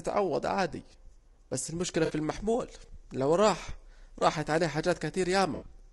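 Throughout, the speech sounds rough and grainy, with noise between harmonics. This is likely low-delay AAC compression, consistent with AAC-ELD at around 32 kbps. At 2.05 s, between "بس المشكلة" and "المحمول لو راح راحت", AAC frame loss with concealment fills 40 ms with a smeared, noisy patch. From 5.55 to 5.73 s, more losses scatter, the longest run near 70 ms.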